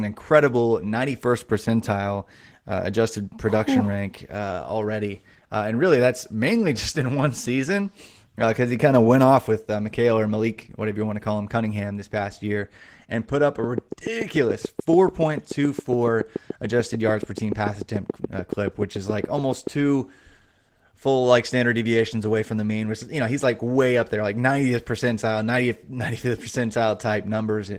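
A speech clip with plainly audible Opus voice compression throughout: hoarse, slightly robotic speech with coarse, smeared high-band texture on a spectrogram, consistent with hybrid-mode coding at around 16 kbps. From 13.64 to 19.68 s a regular train of clicks, about seven per second and around forty in all, stands roughly 10 dB above the speech as evenly spaced vertical spikes, likely from electrical interference.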